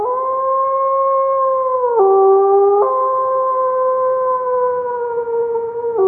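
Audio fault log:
No faults: the signal keeps unbroken continuity across the whole clip, with no audible disturbance at any point.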